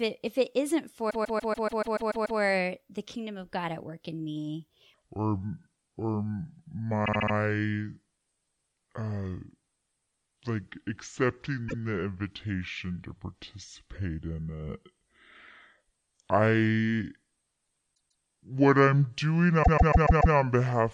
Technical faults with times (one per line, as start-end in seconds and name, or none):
1.09-2.39 repeated frames
4.94-20.94 section at the wrong speed
7.04-7.33 repeated frames
11.68-11.82 repeated frames
17.94-18.23 repeated frames
19.62-20.34 repeated frames